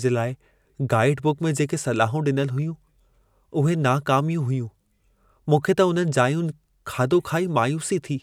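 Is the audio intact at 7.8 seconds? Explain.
Yes, the speech at 7.8 seconds comes through intact, with no dropout, click, distortion or other break at that moment.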